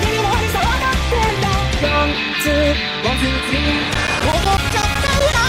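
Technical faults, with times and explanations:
3.94–5.33 s, periodic USB or driver dropouts: regular ticks every 0.125 s, as a background task stalls the audio path and drops about 10 ms to silence each time.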